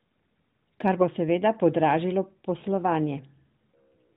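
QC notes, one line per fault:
2.60–2.64 s, lost AMR speech frame: after "bo seveda podražilo" the sound briefly dips and warbles as the decoder repeats the last good pitch and vocal-tract settings at lower gain, which fits one missing 20 ms frame. It is a smeared concealment, not a silent gap or click.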